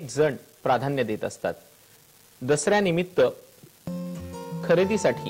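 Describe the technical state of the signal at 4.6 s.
At 4.6 s there is a steady crackle and fizz sitting on top of the sound, and it carries on even where the audio itself goes quiet. This is an unreliable data bit, present across the whole clip rather than at this moment alone. One bit of each sample is flipping at random, so every error lands as a spike of identical size, here a step of about -38 dBFS, scattered irregularly through time.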